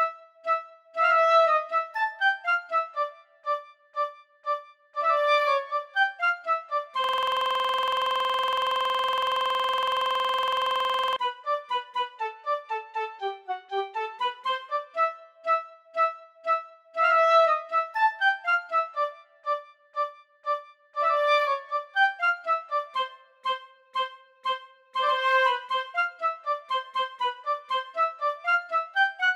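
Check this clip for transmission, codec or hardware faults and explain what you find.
There is one fault, a system hang loop, from 7.04 to 11.16 s. The computer or its audio driver stalled, and the sound hardware kept replaying the same small stretch of its ring buffer. A 46.44 ms piece of audio repeats exactly, close to 90 times, which fits a 2048-sample buffer. At a loop rate of 21.5 Hz, this sits between a buzz and a stutter: a rough, rapid, mechanical rattle.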